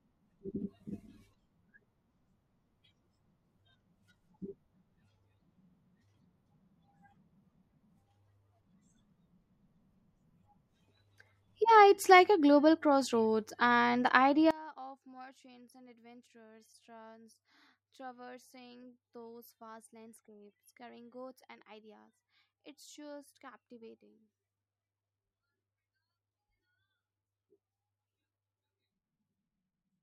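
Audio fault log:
14.51–30.02 s, one channel inverted: From 14.51 s to the end, the speech drops by about 24 dB when heard in mono. What remains is a faint copy. The likely cause is one stereo channel with reversed polarity. Sound common to both channels cancels when they are summed. Only the small difference between the channels survives, so the centred speech nearly vanishes.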